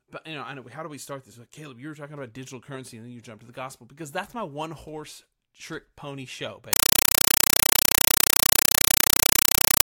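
From 6.73 s, just after "horse trick pony show", the speech gives way to very loud, chattering static that runs to the end of the clip. It is a compressed stream played as audio. A Dolby Digital bitstream, most likely AC-3 at around 256 kbps judging by its burst timing, reached the output as if it were ordinary samples and was never decoded. Each frame sounds as a 5.33 ms burst of noise followed by silent padding, repeating 31.25 times a second to give that harsh rattle.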